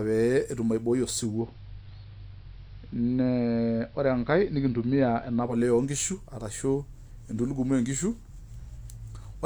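From 1.22 to 5.62 s, digital radio blending to analogue cross-fades into AM over 0.21 s and back: lost treble and faint hiss arrive together.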